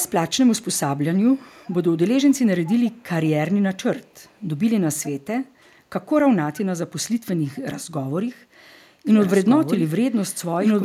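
Speech clip with faint echo leak in three short scraps, at 1.63 to 1.75 s, 2.69 to 3.04 s and 4.25 to 4.34 s. Each is a delayed copy of the voice arriving 409 ms behind and roughly 20 to 40 dB below it, most audible in the middle scrap. The likely cause is a loudspeaker on one side of the call whose echo canceller let residual pickup through. From 9.07 s to the end a doubled audio track appears. A full-band copy of equal loudness runs roughly 1.5 s behind, with no decay or room colour, and it starts abruptly. This is likely a second, slower capture path or an out-of-step edit mixing the same audio in twice.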